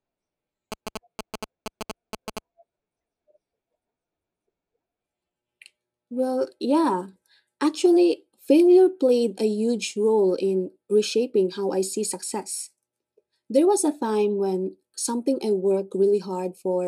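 From 0.72 to 2.39 s, GSM signalling bursts from a nearby 2G phone are rectified by the audio circuit, giving a galloping dit-dit-dit of short 217 Hz buzzes, roughly 10 dB below the speech. A spectrogram shows clustered harmonic stacks; the waveform shows spiky clumps.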